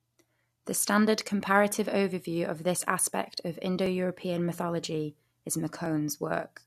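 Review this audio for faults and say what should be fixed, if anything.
After "of this aspect of", periodic USB or driver dropouts tick from 3.86 to 5.86 s, once a second. Each one skips about a millisecond of audio. Fix it by finding and stopping the background task that blocks the USB bus or audio driver every second.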